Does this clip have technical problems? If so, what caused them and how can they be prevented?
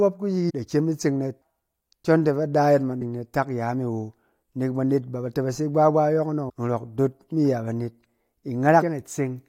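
Yes. Compressed frames were skipped at 0.49–0.51, 1.41, 3.01, 6.48 and 8.81 s. Whole 21.3 ms frames went missing or were rejected by the decoder, so the audio jumps ahead by roughly 0.4, 0.4, 0.2, 0.7 and 0.15 s. Checksummed file transfer and storage prevent this.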